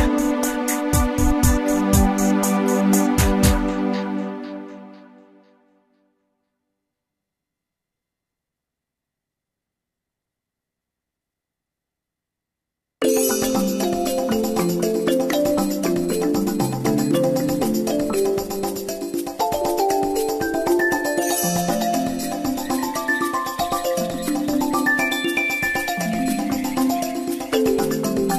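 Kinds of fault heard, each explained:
No fault of any kind can be heard in this clip. There is nothing in the audio to list or explain.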